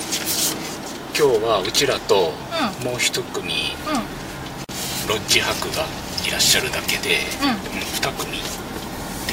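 At 4.64 s there's a gap at a join of encoded pieces: about 45 ms of silence where separately encoded chunks were butted together untrimmed, then the sound resumes where it left off.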